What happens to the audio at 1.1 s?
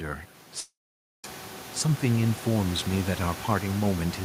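A long network dropout runs from 0.60 to 1.25 s, likely from audio packets that never arrived. The receiver stretches the last sound into a brief fading buzz, then about half a second of silence covers 1.1 s before the sound resumes, with the lost portion simply gone.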